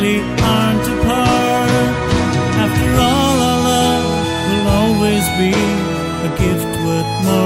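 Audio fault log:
The signal holds steady throughout, with no audible disturbance to its level, continuity or timing.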